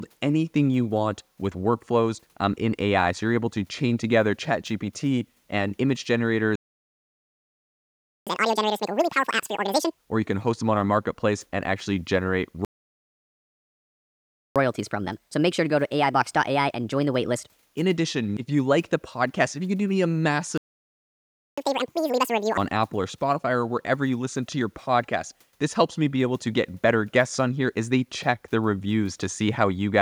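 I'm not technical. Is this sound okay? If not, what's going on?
No. There are two kinds of fault, and they come in pairs.

Playback stall: the player most likely ran short of data or got held up, so the speech cuts to silence mid-flow three times: 6.56 to 8.27 s, 12.65 to 14.56 s, and 20.58 to 21.58 s, gaps of roughly 1.7, 1.9 and 1 second.

Catch-up at higher speed: right after each stall, the player rushes through the speech it fell behind on. From 8.27 to 9.98 s and from 21.58 to 22.58 s it runs at double speed, sounding chipmunk-high. From 14.56 to 17.56 s it runs a quarter faster, noticeably higher-pitched.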